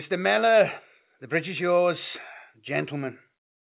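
Nothing stood out on listening to this speech, which comes through a call path whose G.711 mu-law coding leaves nothing above 4 kHz.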